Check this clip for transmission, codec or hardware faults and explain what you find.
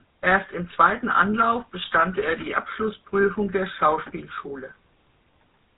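The speech passed through the GSM full-rate codec for its whole length. Its pulse-driven vocal-tract model leaves a buzzy, gravelly roughness, nothing above 3.8 kHz, and quality fitting 13 kbps.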